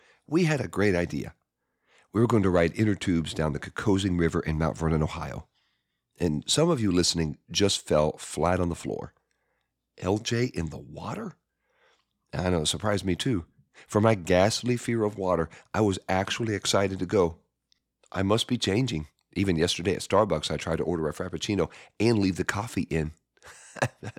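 A single sharp click sounds at 9.61 s, just after "flat on the floor", and another at 19.84 s. Each is likely dropped samples: about 0.7 ms of the stream goes missing, so the waveform jumps abruptly to a later value.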